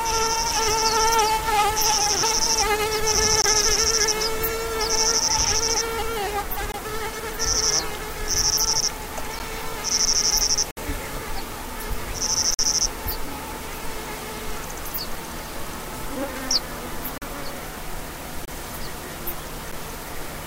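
Blocks of digital silence cut into the sound at 3.42–3.44, 6.72–6.74, 9.39, 10.71–10.77, 12.54–12.59, 17.18–17.22, 18.45–18.48 and 19.72 s, each lasting 9 to 60 ms. They are likely unfilled output buffers, heard as ticks or brief holes, and they show as flat near-silent gaps with vertical click lines at both edges.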